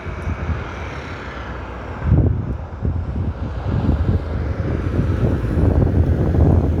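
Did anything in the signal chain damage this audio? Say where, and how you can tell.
No, nothing in the signal chain audibly damaged this audio.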